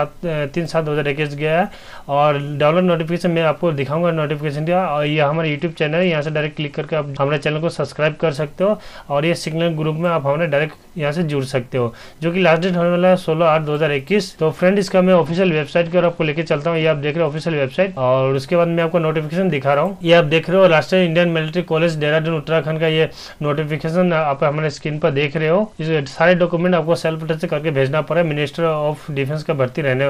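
From 5.1 to 8.3 s, 15.1 to 18.3 s and 24.1 to 26.8 s the treble dulls and gritty noise rises: a Bluetooth SBC bit pool drop, pointing to roughly 88 kbps.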